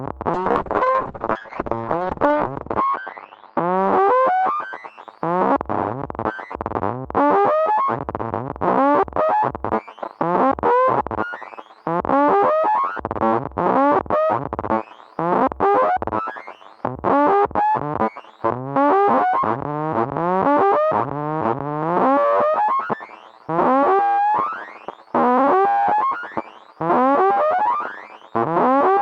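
A recording of everyday sounds with a call bitrate drop from 0.34 s to 4.83 s. The top end is cut off at 8 kHz and the sound turns coarse and watery, worst for about 1.92 s, which points to the encoder falling from around 48 kbps to 6 kbps.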